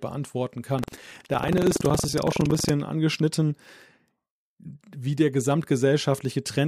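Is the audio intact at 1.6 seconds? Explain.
No. Buffer tearing runs from 0.74 to 2.72 s: writer and reader cross each period, splicing in roughly 15% stale audio from about a tenth of a second earlier. Unlike underrun gaps, this gives a steady 21.5 Hz buzz, fitting a 2048-sample buffer, only while sound plays.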